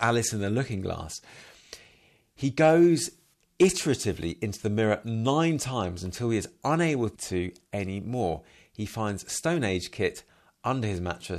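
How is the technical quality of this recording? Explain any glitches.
Two brief overloads mar this speech recording. Hard clipping: at 2.61–2.86 s and 3.62–3.66 s the signal exceeds the stage's ceiling by about 2 dB and about 4 dB, flattening peaks into a short crackly rasp.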